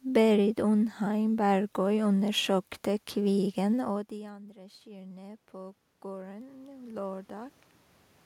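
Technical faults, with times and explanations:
3.38–7.59 s, automatic gain rising: the talker moves near 4 s and input falls about 24 dB, so gain climbs about 14 dB. Voice and room noise swell together, and the waveform envelope and spectrogram brighten gradually.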